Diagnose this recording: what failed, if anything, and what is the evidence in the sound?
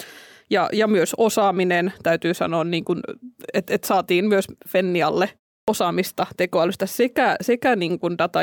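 The failure is at the playback stage, a clipped start after a pause. At 5.64 s the speech resumes after a silence of about 0.33 s. The first sound is missing, and the onset jumps in abruptly from 5.64 to 5.68 s. About 39 ms is lost. The output device went idle during that short gap. It needed time to wake or relock, so the start of the returning sound was swallowed.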